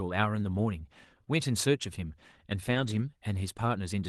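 At 1.25 to 1.28 s there is a short concealed packet loss. About 20 ms never arrived, and the decoder filled 10 ms of it by continuing the preceding speech, so the result is a brief smear or wobble rather than a silent gap.

From 2.66 to 3.00 s, a lost packet was rebuilt from error correction, spread across several packets totalling 180 ms. Unlike concealment, the real speech content survives, just rougher and noisier, because it was decoded from a low-bitrate backup copy.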